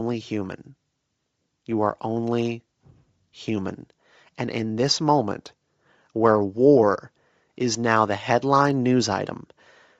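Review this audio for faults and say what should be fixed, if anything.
Throughout the clip the speech has a breathy, grainy edge, likely from Bluetooth LC3 compression. Its upper spectrum is partly zeroed and noise-filled, which fits a low bitrate near 32 kbps with 10 ms frames. Unlike a simple low-pass cut, the top sounds hissy and textured rather than just dull. To prevent it, record over a wired path or set the LE Audio link to a higher LC3 bitrate.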